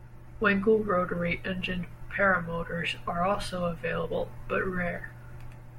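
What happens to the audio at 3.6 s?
Nothing goes wrong at 3.6 s; the speech continues intact through that moment, with no dropout, click or other fault.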